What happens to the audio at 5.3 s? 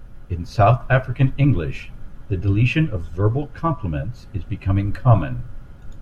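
Nothing goes wrong at 5.3 s; the speech plays through that moment intact, with no dropout, click or distortion.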